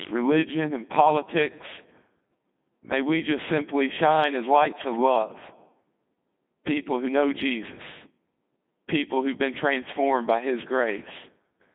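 Codec 2 vocoder, throughout: the speech is rebuilt from pitch, voicing and envelope as sine waves, giving heavy robotic buzz within 150 Hz to 3.6 kHz, consistent with a 2.4 kbit/s mode.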